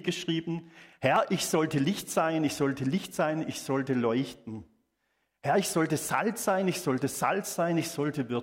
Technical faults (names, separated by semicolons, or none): periodic USB or driver dropouts